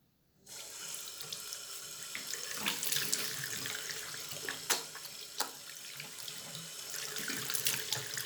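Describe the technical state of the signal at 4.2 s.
Nothing goes wrong with the signal at 4.2 s; the sound there is intact, with no dropout, clipping, glitch or other fault.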